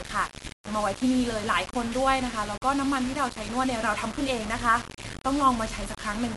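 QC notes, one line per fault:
Throughout, low bit depth without dither: the speech sits on very few amplitude steps, with quantisation error about 10 dB below the signal. The grit follows the voice and swells and fades with it, unlike steady hiss, which points to a likely cause of 5-bit rounding without dither.
Throughout, Dolby Digital compression: the speech sounds dull, with nothing above 11.4 kHz, and a rough, fluttering noise clings to voiced tones. This is plainly audible block-coding damage that fits a likely 64 kbps AC-3 encode, where starved frequency lines are refilled with noise. It differs from the even, signal-tracking grit of the bit-depth fault.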